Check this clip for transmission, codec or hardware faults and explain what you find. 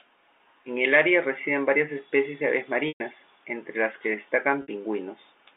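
Two dropouts from packet loss with pitch repetition break the clip. Both happen over a G.711 telephone line whose band stops near 3.7 kHz. At 2.88 to 3.00 s, after "varias especies de aves" and before "entre las que", about 120 ms of audio was lost, which fits four packets. At 4.62 to 4.68 s, just after "entre las que", about 60 ms went missing, consistent with two packets. The receiver filled each gap by looping the last pitch cycle and fading it down. The later gap sounds like a briefly frozen, buzzy tone. The longer one decays toward silence before the speech resumes.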